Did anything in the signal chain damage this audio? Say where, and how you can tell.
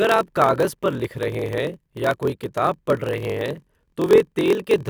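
Yes. There is a block size mismatch (padded) at the driver or buffer stage. One stage hands over blocks shorter than the next stage reads, which fits a 1024-sample read, and zeros fill the remainder of each block. A tiny silent gap therefore lands in every block throughout the speech, producing a steady buzz at 43.1 Hz. The added silence also stretches the audio to 0.938 times normal speed while the timbre stays.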